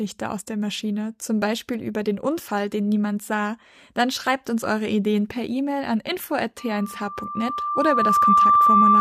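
From 6.58 s to the end, loudspeaker feedback squeal: a 1.2 kHz tone swells over roughly two seconds to about 10 dB above the speech, as mic-to-speaker loop gain exceeds one.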